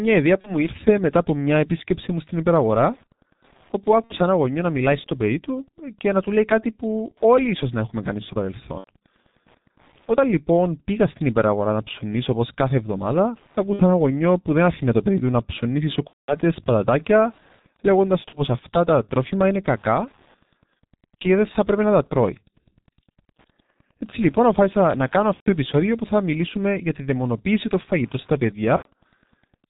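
Throughout the recording a nearby Wi-Fi radio is coupling into the audio circuit, which rectifies its beacon every 102.4 ms. The result is Wi-Fi interference: a faint, steady ticking about ten times a second, roughly 40 dB below the speech.

Also running the whole way through, the speech has been squeezed through the G.723.1 codec. Its heavy damage fits a rate near 6.3 kbit/s. With nothing above 4 kHz and a slowly updated voice model, the speech sounds muffled and hoarse, and consonants smear together.

VoIP packet loss concealed by the speech codec strikes at 0.41 to 0.68 s, 4.04 to 4.17 s, 8.78 to 8.90 s, 13.73 to 13.85 s, 16.07 to 16.37 s, 18.29 to 18.45 s, 25.34 to 25.50 s and 28.76 to 28.88 s. Missing audio ranges from 30 ms to 210 ms, which fits one to seven lost 30 ms frames. Each time, the decoder stretches its last pitch and filter into a sound that fades. The speech stays weak or distorted for a while after packets resume.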